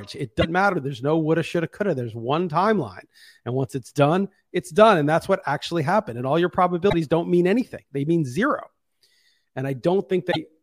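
Three brief glitches break into the speech, at 0.38 to 0.45 s, 6.86 to 6.94 s and 10.28 to 10.36 s, each lasting roughly 70 to 80 milliseconds. They are damaged data in a compressed stream: bytes in those stretches of the encoded file were lost or corrupted, so the decoder misread or rejected the affected frames, lost sync and hunted for the next valid frame header before resuming.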